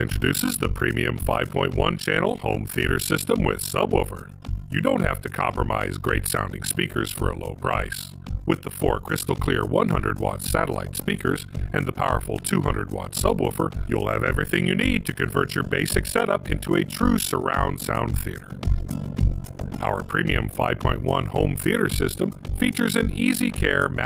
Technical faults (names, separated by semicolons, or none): overlap-add ripple